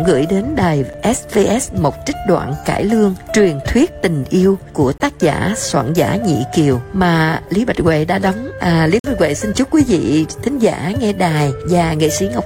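At 0.93 s, 4.98 to 5.00 s and 8.99 to 9.04 s, a gap between stream segments cuts in: timestamps of consecutive 4-second segments leave holes of about 7, 21 and 48 ms, filled with hard-edged silence. Unlike a dropout, no audio is lost; the sound resumes exactly where it stopped.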